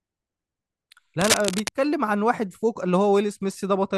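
A speech clip with a burst of cable scratch noise from 1.21 to 1.69 s: dense, uneven scratching and rustling lying only slightly below the speech in level. The likely cause is a worn cable, connector or control being moved, so its contact resistance fluctuates rapidly. Unlike clipping distortion, which appears only on loud peaks, this noise sits over the sound regardless of level and stops when the movement stops, leaving the speech on either side clean.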